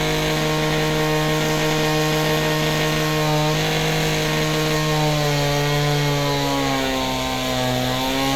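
Nothing in these sounds stood out as a technical problem on listening.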